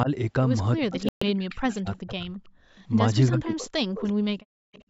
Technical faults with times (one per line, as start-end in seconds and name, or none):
0.04-0.08 speech suppressed in double talk
0.79-2.33 speech suppressed in double talk
1.09-1.23 Bluetooth dropout
2.61-2.75 background gated by the echo canceller
3.29-4.29 speech suppressed in double talk
4.57-4.72 background gated by the echo canceller
4.72-4.83 echo leak